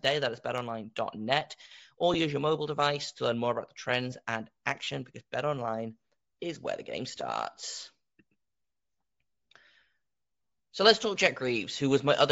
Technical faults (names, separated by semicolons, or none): Bluetooth LC3 compression; one channel drops out; lost LE Audio frames